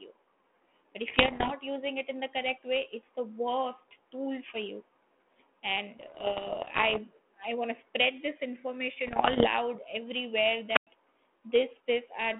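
Pops and rough, crackly bursts with brief jumps in level come in three patches: 1.06 to 1.53 s, ending just before "using it in the"; 5.98 to 6.99 s, running up to "i want"; and 9.07 to 9.48 s. These are bit errors on an ADPCM link, here the 32 kbit/s G.726 path whose 3.4 kHz telephone band is heard throughout. Roughly 1.5, 0.7 and 1.0 percent of bits are flipped in the three patches in turn, and each wrong bit throws off the decoder's step size and prediction, so the damage rings on for a few milliseconds after every hit.

At 10.73 s a short rise of hiss and static gives way to a hole of near silence lasting about 102 ms, and the sound comes back by 10.87 s. This is a wireless microphone squelch dropout: the FM signal from the transmitter faded so far that the receiver's squelch muted the output until the carrier recovered.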